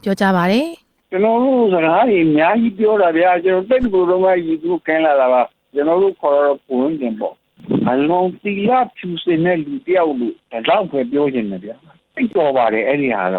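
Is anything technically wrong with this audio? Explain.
Yes. At 0.67 to 0.76 s the sound briefly freezes into a held, fading sound and then jumps ahead. This is a burst of packet loss: about 54 ms of audio was synthesized by stretching the last received sound and turning it down, and about 60 ms of the original was never played.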